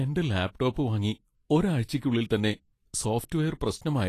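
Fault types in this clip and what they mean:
Vorbis compression: throughout the speech, the treble is hissy and grainy, consonant attacks sound smeared, and nothing is heard above 14.2 kHz. This is likely Vorbis coding at a low quality setting, which fits a bitrate around 33 kbps. At that rate the encoder keeps only a smooth outline of the upper spectrum and quantises the fine detail on top of it so coarsely that the detail is replaced by noise of similar energy.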